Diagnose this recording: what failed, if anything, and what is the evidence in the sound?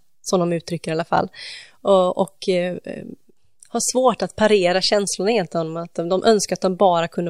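Nothing failed; no fault is audible in this recording.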